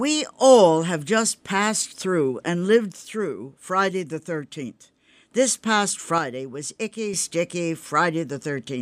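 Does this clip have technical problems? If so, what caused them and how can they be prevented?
Yes. One stereo channel most likely drops out (one channel drops out) twice, from 2.92 to 5.32 s, just after "and lived", and from 6.18 to 7.14 s. In the mono sum the speech abruptly falls about 6 dB during each gap. Securing cables and connectors and monitoring both channels' meters during recording prevents this.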